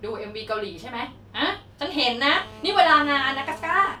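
From 2.30 s to 3.96 s, GSM phone buzz intrudes: a nearby 2G handset on a call, its 217 Hz radio bursts rectified into a steady raspy buzz about 20 dB down, drawing evenly spaced harmonic lines on a spectrogram.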